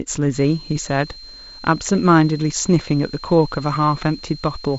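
A switching power supply is running in an audible burst mode or beating with another one, leaking a switching supply whistle into the speech from 0.34 s to the end. It sounds like a thin, high tone wandering between 4.1 and 4.2 kHz, roughly 20 dB below the speech, above a wideband signal that stops near 7.7 kHz.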